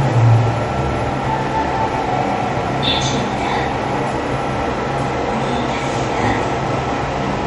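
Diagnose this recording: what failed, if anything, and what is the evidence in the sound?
The codec stage is where this one went wrong, with MP3 compression likely to blame. The whole clip has a hard ceiling, with nothing above 11 kHz, and quieter detail swirls and comes and goes as weak frequency lines drop out frame to frame. The damage is plainly audible, which fits a starved bitrate around 48 kbps.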